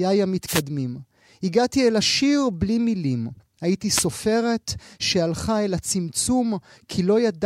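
Wireless microphone noise hits occur from 0.46 to 0.62 s and from 3.94 to 4.05 s. Each time, the analogue FM radio link fades as reflected signals cancel, the receiver's noise floor surges, and a brief swish of static breaks over the speech.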